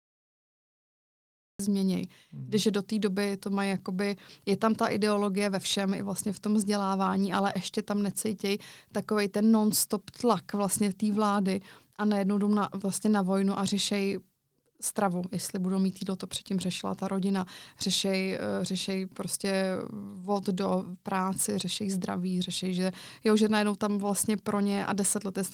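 The clip opens with a cut-off start: digital silence runs from 0 to 1.59 s, then the speech drops in mid-sound with no natural attack. The recording or stream evidently began late, so whatever came before that point is missing. The Opus voice compression is audible only as light coding damage.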